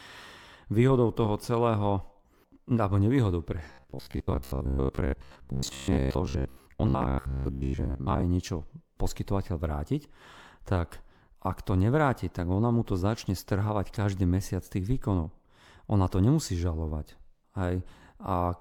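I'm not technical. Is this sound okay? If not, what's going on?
No. From 3.72 to 8.23 s, right after "nevýhodou pre", the speech turns into a rigid metallic buzz near 67 Hz: robotic sound from repeated short buffers, likely from audio arriving too slowly.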